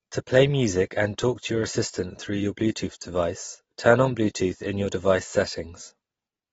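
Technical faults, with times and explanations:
Throughout, AAC compression: nothing gets through above 7.6 kHz, so the speech sounds dull, with a smeared, warbly fizz on sibilants and held sounds. That's likely a low-bitrate AAC encode, around 24 kbps, cutting the top band and starving the rest.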